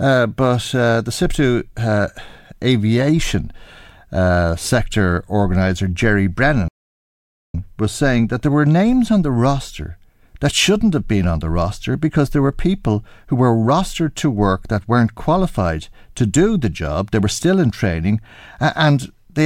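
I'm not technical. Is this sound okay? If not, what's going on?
No. At 6.68 s the speech cuts to silence for about 0.86 s, then resumes at "was saying that there". This playback stall likely came from the player running short of data.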